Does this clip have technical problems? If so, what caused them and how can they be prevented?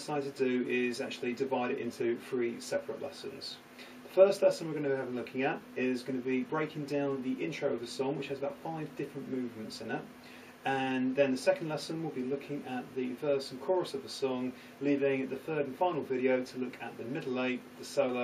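No, this clip has no technical problems, so there is nothing to trace to a cause or prevent.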